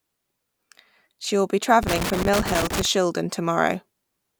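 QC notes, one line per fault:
1.83–2.85 s, loose connector crackle: for about a second the speech is broken up by an irregular burst of crackle and scratching. The fault points to a worn or dirty contact in the signal path that was shifting and repeatedly making and losing connection. Each break chops the signal off, and any DC on the line turns each reconnection into a pop. The uneven spacing of those interruptions gives the rough, scratchy texture.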